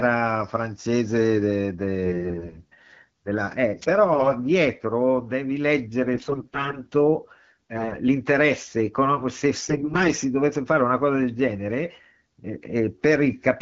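Between 2.06 and 2.60 s the speech turns hoarse and gargly while keeping its pitch and level. These are AMR bit errors: on a weak link, the less protected bits of each frame arrive flipped, about one in ten. The excitation pulses land wrongly and the fine pitch, gain and spectral values drift. From 3.81 to 3.86 s a brief swish of static cuts across, a wireless microphone noise hit, where the analogue FM signal faded and receiver noise rose. The scratchy AMR bit errors return at 4.13 to 4.31 s, 6.14 to 6.80 s (harshest, nearer one bit in seven), 7.76 to 7.97 s, and 9.55 to 10.07 s.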